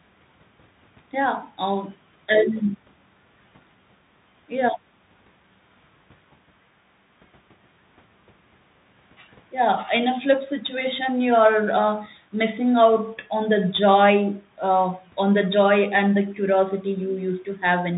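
From start to finish the speech runs through a Bluetooth CVSD headset codec, which fits a 64 kbps one-bit stream. Each sample only nudges the level up or down; the codec is narrowband, so nothing passes above 4 kHz, fast loud peaks distort, s sounds scratch, and granular hiss sits underneath.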